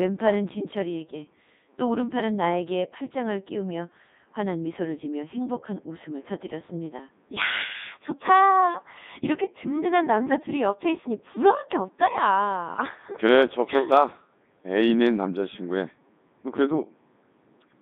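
Codec 2 vocoder damage runs through the whole speech clip. The decoder rebuilds the voice from sine waves driven only by pitch, voicing, energy and spectral envelope, so the waveform is lost. The result is heavily buzzy and robotic, confined to about 200 Hz to 3.7 kHz, which fits the codec's top 3.2 kbit/s mode.

Bit errors on digital voice radio strike at 10.30 to 10.36 s and again at 12.74 to 12.81 s. Corrupted bits in what sounds like two vocoder frames the first time and three the second scramble pitch, level and timbre. The first burst is the denser of the two, and each one breaks into brief warbling, bleepy gibberish.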